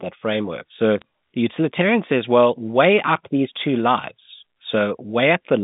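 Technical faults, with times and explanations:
1.01 s, bit errors on a digital phone line: a brief burst of sharp ticks just before "the utilitarian says well", consistent with a handful of corrupted frames at a low error rate of roughly 0.15 percent of bits. On this A-law G.711 line each flipped bit alters a single 8-bit sample. Hits on the high-order bits, or on the sign of a loud sample, throw that sample far from its neighbours, and the resulting discontinuities are heard as crisp clicks over unchanged speech.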